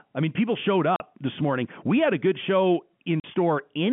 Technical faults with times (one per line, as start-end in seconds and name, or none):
0.96-1.00 packet loss filled with silence
3.20-3.24 packet loss filled with silence